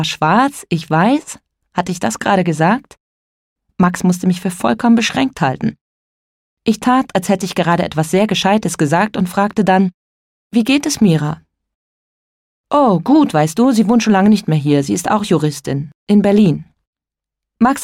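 No technical faults are audible.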